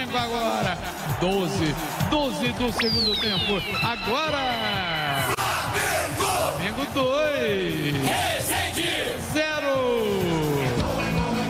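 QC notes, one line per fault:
No faults heard anywhere in this clip.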